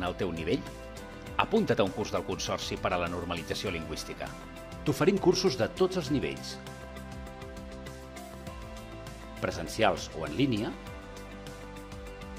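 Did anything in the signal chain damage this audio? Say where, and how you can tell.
No, nothing in the audio stood out on listening as a sign of damage from any stage of the signal chain.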